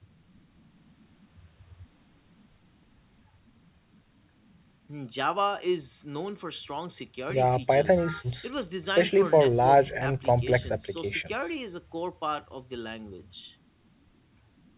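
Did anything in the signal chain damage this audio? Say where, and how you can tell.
No, no stage of the chain damaged this audio.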